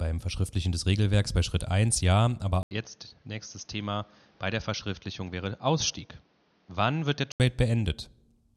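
At 2.63 s the speech drops out for 80 ms, then returns duller and quieter, by roughly 5 dB. Nothing reaches above 6.5 kHz, and a new noise floor sits well below it. This is likely an input switched to a poorer device. The fuller sound returns at 7.4 s.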